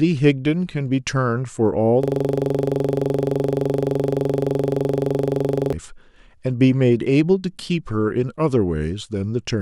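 From 2.03 to 5.73 s there's a system hang loop: the machine froze while the hardware kept replaying one 42.67 ms slice of the speech, which fits a 2048-sample buffer, close to ninety times. You hear a rough, rattling buzz repeating at 23.4 Hz.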